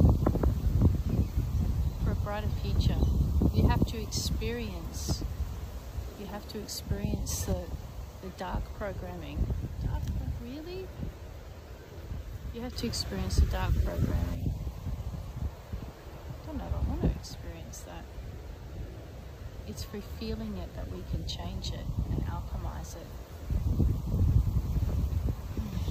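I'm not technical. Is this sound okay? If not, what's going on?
No. Twice the whole sound suddenly jumps up in level and then drops back: from 7.29 to 7.52 s, and again from 12.73 to 14.35 s. This is a sudden gain jump, likely a volume setting changed instantly inside the equipment rather than smoothly. What tells it apart from a fade or an automatic level control is that the change is instant, and the background hiss rises and falls at exactly the same moments as everything else.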